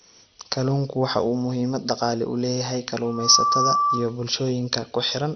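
Throughout the speech, a low-bitrate encoder has likely starved the upper sub-bands of bits, the signature of MP2 compression at a rate that fits something near 48 kbps. With too few bits, whole high bands are switched off, so nothing remains above about 6.2 kHz. The bands that survive are coarsely quantised and flicker in and out. The result is a dull, muffled sound carrying a granular, gurgling roughness, much like weak digital radio.

At 0.52 s, a single flipped bit in one sample throws its value sharply off and straight back. This bit error spike is heard as one hard, broadband tick that has nothing to do with the surrounding audio. A second spike lands at 2.90 s, just after "muhiimad dhaqaale u leeyahay", again as a lone click with no tonal character.

From 3.05 s to 4.17 s, also following "muhiimad dhaqaale u leeyahay", a microphone is picking up the loudspeaker it feeds. At 1.2 kHz the loop gain exceeds one, so that frequency feeds on itself and grows. 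This loudspeaker feedback squeal swells over roughly a third of a second into a steady, piercing tone about 5 dB louder than the speech. It persists until 4.17 s.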